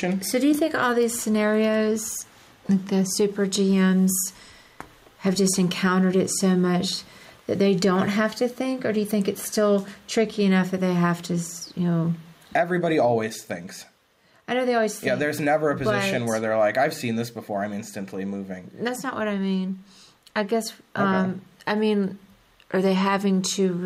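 Gain pumping runs through the whole clip. The level ducks by around 10 dB under each loud sound, squashing loud and soft parts closer together. This is likely input gain set far too high, with a fast limiter clamping down.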